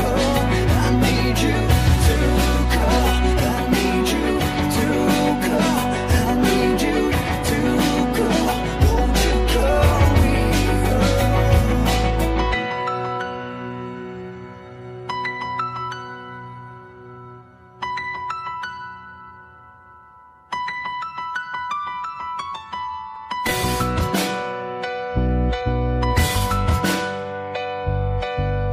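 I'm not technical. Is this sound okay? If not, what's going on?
Yes, nothing here sounds wrong; no problems stand out.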